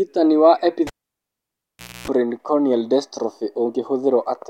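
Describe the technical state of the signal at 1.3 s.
At 1.3 s the speech has dropped to near silence. It sits inside a cable pulled and plugged in event spanning 0.87 to 2.08 s. A pop at 0.87 s marks the live connector coming out, leaving the input open for about 1.16 s. While only the tip touches, a 60 Hz mains buzz of about 0.26 s comes through, and a second pop at 2.08 s restores the signal.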